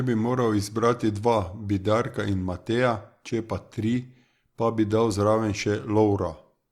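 Nothing in the speech recording points to a technical fault at any moment.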